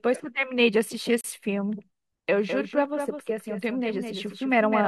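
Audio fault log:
1.21–1.24 s, gap between stream segments: the sound cuts to a hard-edged silence of about 33 ms, then resumes with nothing missing. Two segments' timestamps leave a small gap that the player fills with silence, which fits a boundary in a stream cut into 4-second pieces.
2.48 s to the end, doubled audio track: a full-band copy of the speech starts abruptly and trails the original by roughly a fifth of a second at about 5 dB lower, with no decay or room colour. The cause is likely a second capture through a slower path, or an edit holding two offset copies.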